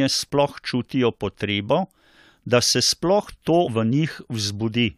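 At 3.66 to 3.68 s the speech is interrupted by a short burst of damaged data in the compressed stream. Corrupted bytes there mean the decoder cannot read those frames correctly, drops sync and hunts for the next valid frame header. For about 20 ms this comes out as a brief glitch. A spectrogram shows a narrow vertical disruption breaking the normal speech harmonics, and the waveform shows an abrupt discontinuity at the edges of the glitch.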